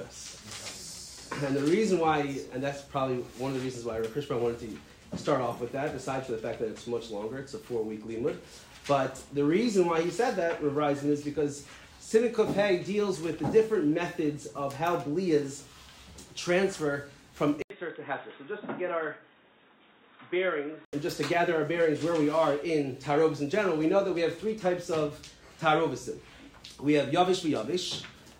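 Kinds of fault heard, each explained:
Input switched to a poorer device: at 17.62 s an 80 ms gap breaks the sound, which then returns dull and boxy with nothing above 3.8 kHz, a few decibels quieter, over a new background noise well below the signal, until 20.93 s when full clarity resumes. The likely cause is the input moving to another microphone or a headset call profile. A simple filter or bandwidth drop would narrow the sound without the silent gap, level shift and changed noise floor.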